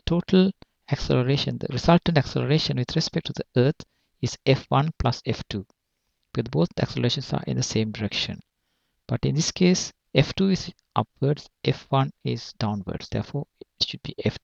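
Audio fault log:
Nothing to log here, as no faults turn up anywhere in this one.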